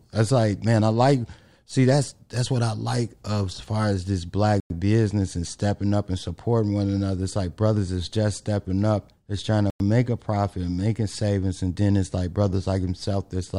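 At 4.60 to 4.70 s and again at 9.70 to 9.80 s, the speech stops for 100 ms in a gap between chunks: a short silence falls at the join between 5-second blocks. Unlike a dropout, no speech is lost; it just resumes afterward.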